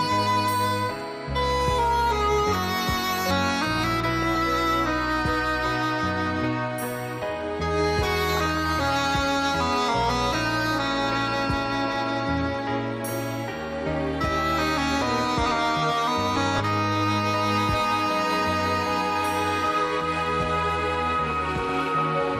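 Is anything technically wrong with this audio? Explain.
Yes. Two problems can be heard.

Throughout, the sound is dull and has a gurgling, granular roughness. This is likely MP2 compression at a low rate, around 80 kbps. Too few bits force upper sub-bands to switch off. The remaining bands are coarsely quantised.

Four short bursts of DAB burbling occur, at 4.19 to 4.38 s, 8.29 to 8.76 s, 16.36 to 16.60 s and 21.28 to 21.99 s. They sound like brief blips of noise. Bit errors, a few tenths of a percent, slip past error correction. Wrong samples put short blips of noise into single sub-bands.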